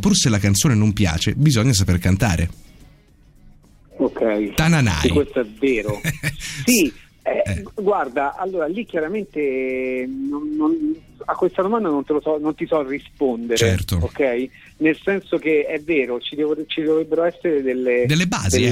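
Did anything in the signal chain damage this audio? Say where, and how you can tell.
No, nothing in the signal chain damaged this audio.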